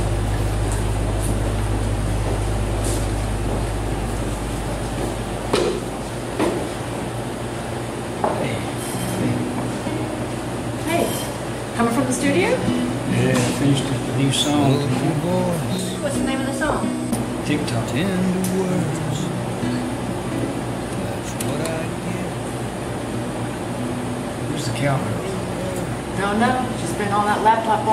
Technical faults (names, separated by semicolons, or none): none